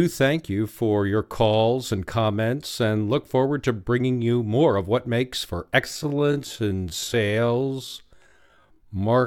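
From 5.80 s to the end at 9.27 s there's a time-stretched section: the speech slows to about 0.57x at unchanged pitch, likely software stretching.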